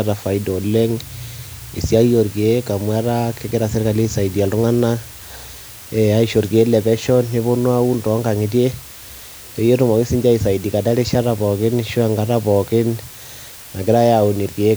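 Low bit depth with dither runs throughout this speech clip: a steady, even hiss sits only about 20 dB below the speech, which fits roughly 6-bit dithered quantisation.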